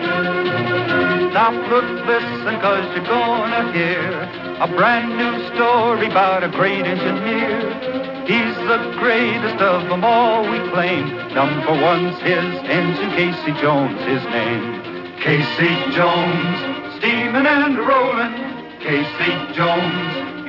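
No technical faults are audible.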